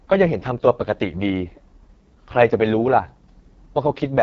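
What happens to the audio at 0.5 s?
At 0.5 s you're hearing the AMR wideband (HD Voice) codec at work, and it runs through the whole clip rather than starting there. The speech is rough and raspy, with a gritty, buzzy edge, which fits the lowest AMR-WB mode around 6.6 kbit/s. At that rate the pulse-driven vocal tract model can't track the voice closely, so the harmonics come out coarse. There's nothing above about 7.5 kHz, and the top band is just shaped noise.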